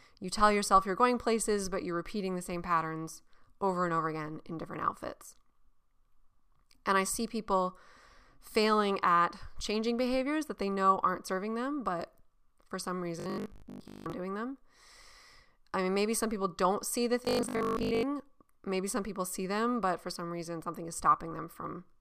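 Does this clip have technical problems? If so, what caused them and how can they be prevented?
Yes. Robotic sound from repeated short buffers appears twice: from 13.20 to 14.12 s, after "them but for some" and before "doing them", and from 17.25 to 18.07 s, after "people don't see the". The speech becomes a rigid 50 Hz metallic buzz, which fits a 20 ms stretch being looped over most of each span. The likely cause is audio arriving too seldom, so the same fragment is replayed while new material is skipped. Unlike ordinary dropouts or stutter, nothing goes silent, and the fixed pitch persists while the speech contour still roughly shows through. Enlarging the playback buffer and fixing the delivery timing would prevent it.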